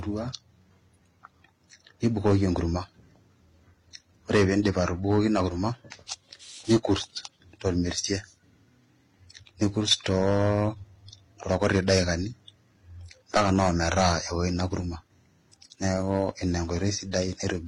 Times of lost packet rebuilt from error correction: none

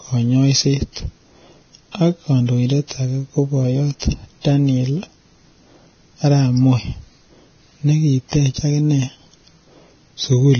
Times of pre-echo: 3.99-4.02

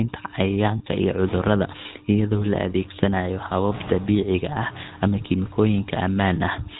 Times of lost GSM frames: 0.78-0.81

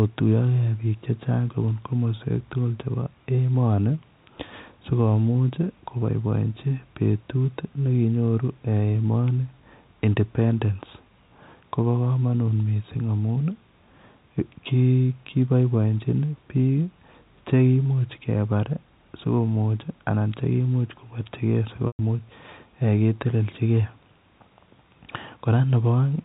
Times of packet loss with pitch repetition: 21.87-21.99

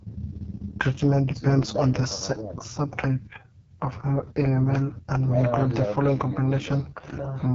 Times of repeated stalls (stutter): none

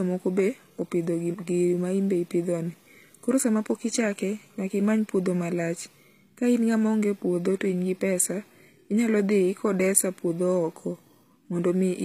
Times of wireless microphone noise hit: none

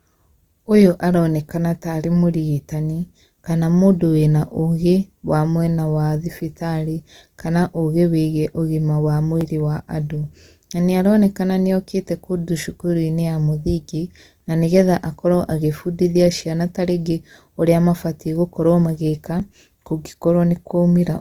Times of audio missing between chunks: 9.41, 19.40

